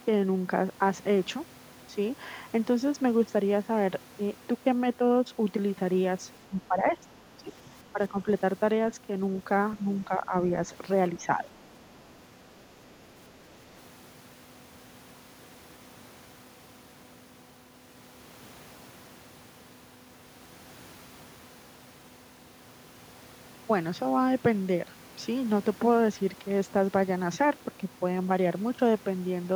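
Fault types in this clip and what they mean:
Speech suppressed in double talk: the speech level dips in five short patches between about 6.5 and 11.5 s, falling by roughly 5 to 15 dB at worst, likely an echo canceller turning down the near talker while the far side also spoke.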